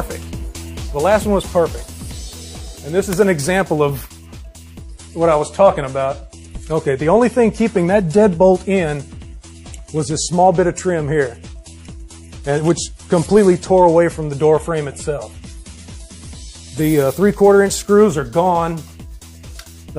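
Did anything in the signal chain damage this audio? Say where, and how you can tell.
Yes, the damage happens at the network stage, through the codec. From 4.81 s to 16.81 s, an adaptive stream plays at a lower bitrate. Nothing survives above 11.5 kHz, and artefacts thicken. The switch is abrupt, with no gap. It fits MP3 dropping from 128 to 48 kbit/s.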